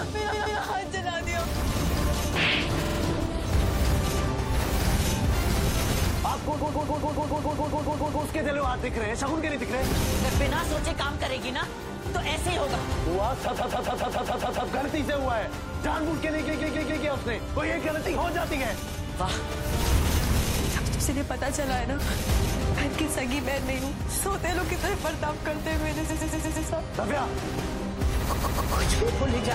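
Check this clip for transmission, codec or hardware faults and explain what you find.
Repeated frames occur eight times: at 0.31–0.59, 2.85–2.98, 6.56–8.23, 13.55–14.66, 16.48–17.03, 20.86–21.00, 26.09–26.67 and 28.32–28.74 s. Each time, a block of compressed data, mostly 139 ms long (46, 70 and 116 ms in three cases), is decoded again, two to twelve extra times in a row. The result is a mechanical stutter. Unlike a dropout, nothing goes missing and there is no gap. The same slice loops exactly, adding time rather than removing it.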